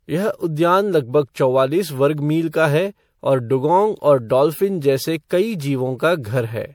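The speech throughout the clip sounds swirly and hollow, with a smeared, watery texture and consonant attacks that blur rather than snap, and nothing above 20.9 kHz. This is generation loss, likely from the audio being passed through an MP3 encoder around five times at a rate that fits 96 kbit/s. Each pass re-quantised the signal on a shifted frame grid, so the noise and spectral holes piled up beyond what that bitrate alone would produce.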